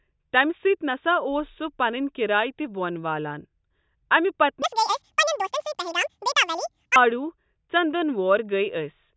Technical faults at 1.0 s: none

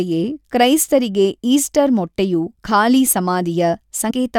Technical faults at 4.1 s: compressed frames skipped

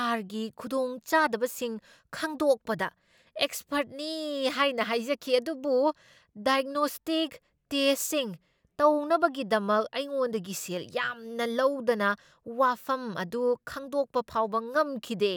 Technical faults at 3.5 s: none

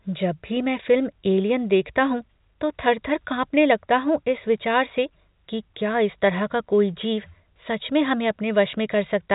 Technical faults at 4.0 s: none

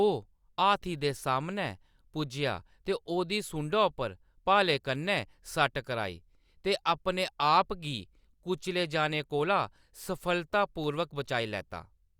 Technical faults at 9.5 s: none

